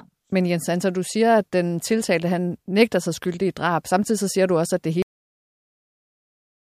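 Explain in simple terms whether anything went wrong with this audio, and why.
The recording system stopped saving the final stretch of audio, a cut-off end. At about 5.02 seconds the speech ends abruptly mid-sound, with no natural fade, and everything after that point is dead digital silence until the clip finishes.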